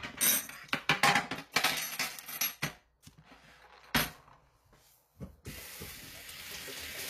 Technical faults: HE-AAC compression

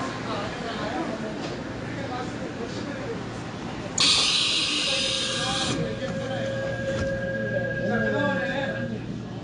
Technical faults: transcoding between lossy codecs

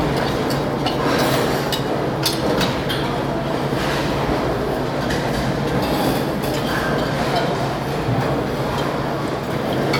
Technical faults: none

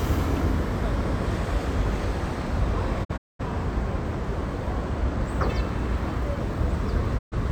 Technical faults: digital broadcast dropout

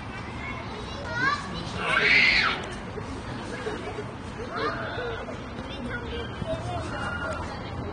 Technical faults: AAC compression

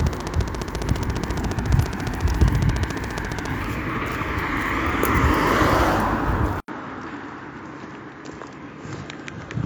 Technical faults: train of clicks; input switched to a poorer device

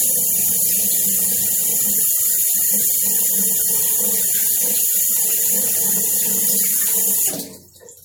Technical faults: generation loss

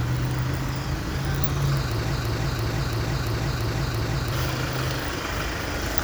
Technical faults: broken-record loop

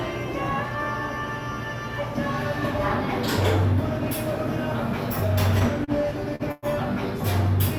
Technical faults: short stall from a late packet; call audio freeze

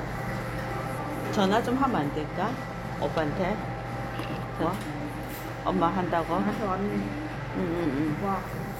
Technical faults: compressed frames skipped

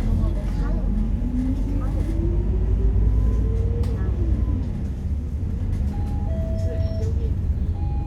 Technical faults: none

